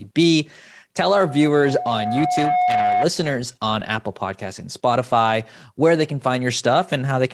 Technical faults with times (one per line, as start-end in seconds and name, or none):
1.08-3.07 loudspeaker feedback squeal
2.77-2.83 lost packet rebuilt from error correction
3.79-3.85 lost packet rebuilt from error correction
4.93 lost packet rebuilt from error correction